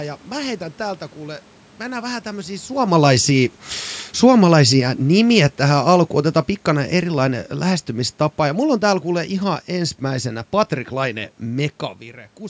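From 4.08 s to 10.3 s the level of the speech slides downward by about 9 dB: automatic gain falling. The gain control found the input too loud, or its background noise too strong, and eased its gain back over those six seconds. What separates it from a talker moving relative to the microphone, as happens around 2.5 s and 12 s, is that the room noise sinks along with the voice, because the whole signal is being turned down.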